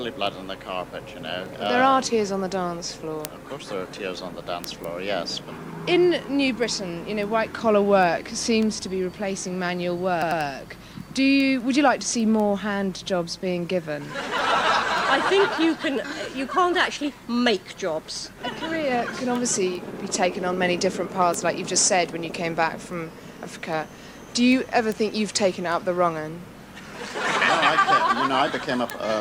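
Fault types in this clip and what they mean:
Repeated frames: a 96 ms block of compressed audio plays two extra times around 10.2 s, a stuttering loop, visible as identical repeated waveform segments adding 192 ms.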